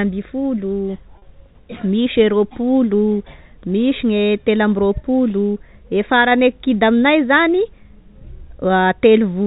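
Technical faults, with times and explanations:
1.18–1.22 s, packet loss with pitch repetition: about 40 ms of speech is missing, which fits two lost 20 ms packets. The receiver repeats the last pitch cycle to fill the gap, so the speech briefly holds a buzzy tone instead of going silent or clicking.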